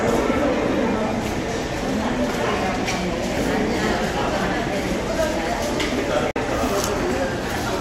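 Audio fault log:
6.31–6.37 s, Bluetooth dropout: the sound cuts out for about 60 ms, a hole of silence, and then carries on further along, as though it had kept playing through the gap. The likely cause is wireless packets that failed to reach the headphones in time and were discarded, leaving the output silent until valid data arrived again. The size of the hole fits roughly two lost audio frames.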